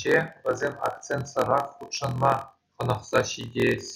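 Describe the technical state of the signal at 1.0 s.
At 1.0 s the speech carries a block size mismatch (padded), present across the whole clip rather than at that moment alone. Each block arriving from one stage is shorter than the block the next stage reads, which fits a 1024-sample read, and the shortfall is filled with silence. Those tiny regular gaps produce a steady 43.1 Hz buzz, and the speech runs at 0.938 times normal speed. Unlike a sample-rate mismatch, the pitch stays about normal despite the slowdown.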